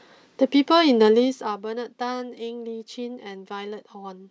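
From 1.04 to 1.65 s the speech drops in level with a fine ticking or zipping laid over it, a rapid train of small clicks that lasts only as long as the level is moving. This is zipper noise. The gain was lowered in hard 1 dB steps with no smoothing between them, about twenty steps a second, for a fall of roughly 15 dB. Each abrupt jump puts a small discontinuity into the waveform, and the run of them is heard as the zipper.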